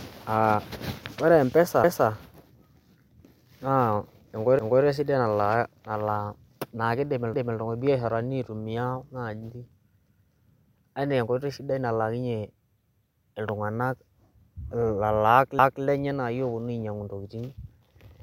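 At 1.84, 4.59, 7.34, 10.09 and 15.59 s the speech stutters: each time a 250 ms stretch plays twice, a fault of overlapping chunks. The audio was handled in 2.5 s blocks, and each new block began a quarter second before the previous one ended, so every join repeats material. On a waveform, the same 250 ms envelope appears back to back; a spectrogram shows duplicated formant patterns with a hard vertical edge at the seam.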